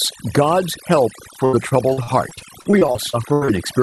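Right from the start there's overdone noise removal on the whole thing. The suppressor was pushed hard enough that it's pulling individual frequency bands down to nothing whenever they sit close to what it thinks is noise, and the softer parts of the speech get dragged under with them. So the background drops away with little twinkly specks in it.

Then from about 1.45 s to 3.49 s you get repeated packet loss, and it sounds properly robotic. Over that two-second stretch the audio keeps dropping out in short holes, the longest around 82 ms, and each one gets papered over by stretching the last bit of sound before the next hole arrives. About a quarter of that span is concealment rather than real audio, which is why it turns choppy with chunks missing. The call path underneath, topping out around 12 kHz, fits an Opus-style call codec.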